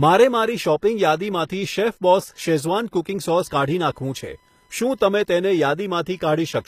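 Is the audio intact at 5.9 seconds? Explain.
No. At 5.9 seconds two faults are present, and both run through the whole clip.

The first is computer activity noise. Load changes in the processor, graphics card or mouse shift the ground that the audio circuit shares. That pushes a buzz into the signal. Here it pulses at around 1 kHz and sits around 40 dB below the speech. It rises and falls with the computer's work, not with the speech, so it does not follow what is being said.

The second is plainly audible codec damage, likely from HE-AAC compression. The band above the mid treble is rebuilt rather than kept. Lower bands are copied upward and shaped by a coarse envelope. The rebuilt harmonics do not line up with the real ones where the two meet. S sounds come out gritty, metallic or lispy. The damage points to a low bitrate, around 24 kbps. Nothing is present above 14.9 kHz.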